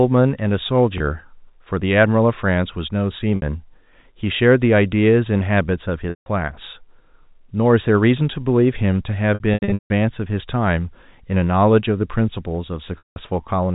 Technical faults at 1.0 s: packet loss with pitch repetition

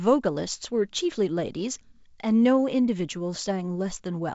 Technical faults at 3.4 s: none

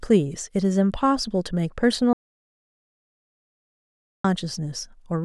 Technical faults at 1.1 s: none

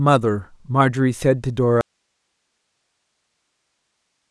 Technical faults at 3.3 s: audio dropout to a faint residue

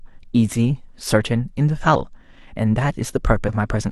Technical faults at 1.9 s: compressed frames skipped

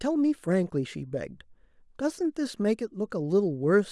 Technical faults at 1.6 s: none

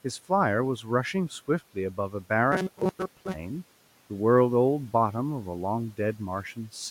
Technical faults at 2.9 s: robotic sound from repeated short buffers

